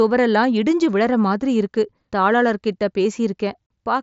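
No technical faults can be heard in this speech clip. It carries the sound of a Bluetooth mSBC headset codec working as intended, with nothing above about 7.7 kHz and a light grain on the louder passages.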